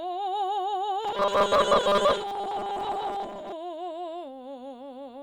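A music clip with robotic sound from repeated short buffers between 1.05 and 3.53 s. Across that span the music turns into a rigid, metallic buzz fixed at 200 Hz. It still loosely tracks the music underneath. The likely cause is new audio arriving too seldom, so the player keeps replaying its last tiny slice. A 200 Hz buzz fits a slice about 5 ms long. Roughly seven tenths of that stretch is repeated material, not real audio.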